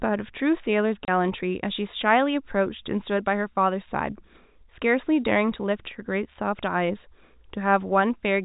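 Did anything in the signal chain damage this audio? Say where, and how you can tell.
Yes, there's packet loss filled with silence at the network stage. At 1.05 s the speech drops out into a dead hole lasting about 30 ms, ending at 1.08 s, with hard edges. That length fits a single lost packet. The receiver had nothing to conceal with and just played silence. The G.711 telephone coding itself is doing its normal thing, with the top cut at 4 kHz and only faint quantisation hiss under the speech.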